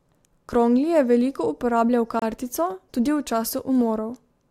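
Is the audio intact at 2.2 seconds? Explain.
No. A gap between stream segments opens from 2.19 to 2.22 s. At a boundary between 2-second segments, the time stamps of the next segment start slightly later than the previous one ends, and the player fills the 27 ms hole with silence. It sounds like a brief, hard-edged dropout cutting into the speech. No audio is lost: the speech resumes intact, just pushed 27 ms later.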